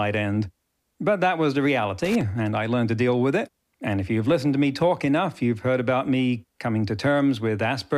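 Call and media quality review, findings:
Loose connector crackle, 2.01–2.21 s, between "that was the" and "and I learned to". Irregular scratchy burst, about 0.2 s. Worn or dirty contact in the cable or jack chopping the speech path. Unlike digital dropout clicks, the bursts are uneven in spacing and level, with rough scraping texture rather than clean, regular gaps.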